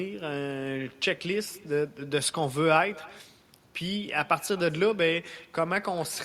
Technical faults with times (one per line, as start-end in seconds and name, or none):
0.00-6.24 echo with no canceller